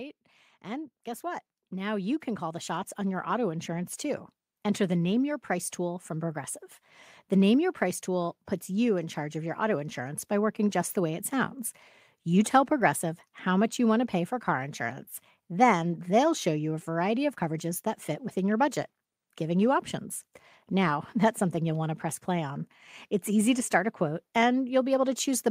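From 0.63 s to 17.75 s, the level climbs slowly and steadily. This is automatic gain rising. The automatic gain control judged the input too quiet and kept turning its gain up. Over those seventeen seconds it adds about 12 dB. The speech grows louder, and the background noise rises with it. Nothing jumps. The whole sound swells together, so the noise floor becomes more noticeable as the clip goes on.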